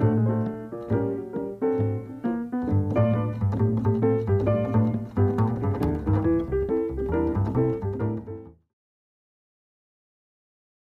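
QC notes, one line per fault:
Nothing stood out on listening; the level eases out smoothly from about 7.5 s to 8.74 s, as an editor would fade it.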